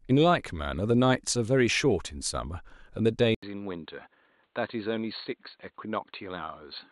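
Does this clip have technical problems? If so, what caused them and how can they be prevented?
Yes. At 3.35 s the speech cuts out for 80 ms, then returns duller and boxier until the end. Nothing above 4.4 kHz survives after that point. The level drops by about 5 dB. A faint new background noise appears, well below the speech. This is likely an input switched to a poorer device, such as another microphone or a headset's call profile, with its own narrow band, tone and noise. Lock the input device before recording and turn off automatic device switching.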